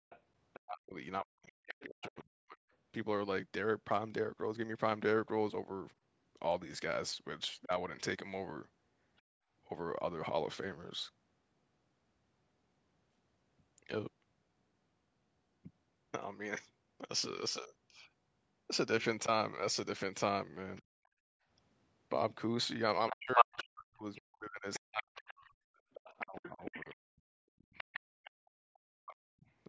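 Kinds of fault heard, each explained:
Background gated by the echo canceller: The room sound drops away by about 32 to 38 dB at 0.0 s, from 9.22 to 9.51 s and from 20.82 to 21.49 s. The canceller clamped the microphone hard while its loudspeaker played, then released it.
Other side's voice leaking through: A second voice sits faintly under the speech from 0.1 to 2.24 s (about 20 dB down), from 7.63 to 9.21 s (about 30 dB down), and more plainly from 20.76 to 28.0 s (about 10 dB down). The likely cause is loudspeaker sound the echo canceller failed to remove.
Speech suppressed in double talk: The talker's speech sinks by up to around 40 dB, in pieces totalling roughly a second and a half, from 0.6 to 2.72 s. It dips by about 10 dB at 7.65 s and is cut back for about five seconds between 23.11 and 29.44 s. This is likely the canceller muting both sides while they overlapped.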